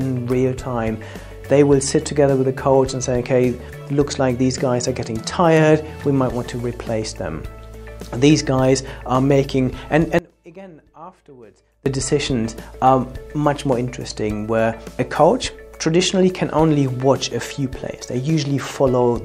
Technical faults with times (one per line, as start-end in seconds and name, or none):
10.19-11.86 audio dropout to a faint residue